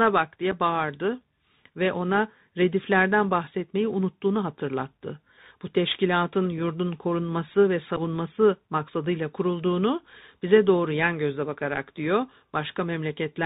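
The clip is speech carried over a Bluetooth CVSD headset codec, and the codec damage is plainly audible from start to finish. CVSD encodes a single bit per sample, up or down, with an adaptive step size, and the narrowband character here fits a 64 kbps CVSD link. Nothing above 4 kHz gets through, so the speech sounds boxy and dull. Sibilants come out scratchy where loud high-frequency energy outruns the step size, and a granular hiss sits beneath the speech. There are also two events of unconcealed Bluetooth headset packet loss. Each removes about 7.5 ms, roughly a couple of packets, with nothing filled in over the gap. The first is at 0.51 s, just before "bağırdı ve ona rediflerden". The second falls between 7.97 and 8.00 s, just after "teşkilatın yurdun korunması ve". Both are heard as brief holes with abrupt edges, and the speech returns momentarily quieter as the CVSD step size rebuilds after the gap.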